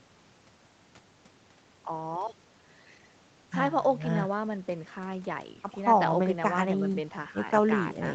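Nothing here stands out as a fault: the speech comes through a normal call path, with the top end stopping around 8 kHz the way a wideband call codec typically leaves it.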